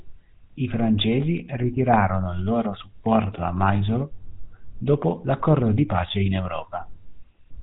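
From start to finish, the speech carries GSM full-rate codec damage, plainly audible. The codec rebuilds the voice from a vocal-tract model driven by sparse regular pulses. That gives a buzzy, gravelly roughness. Nothing above 4 kHz survives. The sound fits a 13 kbps rate.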